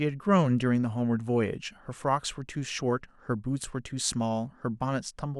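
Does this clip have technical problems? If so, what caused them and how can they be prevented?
No, there are no technical problems to report in this recording. Since nothing has gone wrong, there is no cause to trace and nothing that needs preventing.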